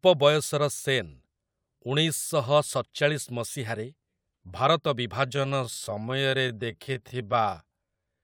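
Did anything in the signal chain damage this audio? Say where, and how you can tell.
Yes. A time-stretched section runs from 5.24 s to the end. The speech slows to 0.615 times its pace at unchanged pitch and drags, likely from stretching in processing software.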